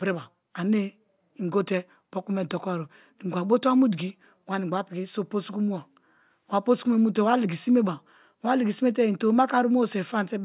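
No technical faults detected.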